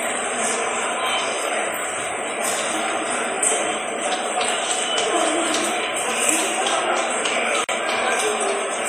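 A short recording of sounds with one fault near the end: a gap at a join of encoded pieces, running from about 7.64 to 7.69 s. The sound just drops out for roughly 47 ms, with smeared edges, then picks up where it left off. It sounds like the audio was encoded in separate chunks and butted together untrimmed, so the encoder's start-up delay and last-frame padding left that silent hole at the seam.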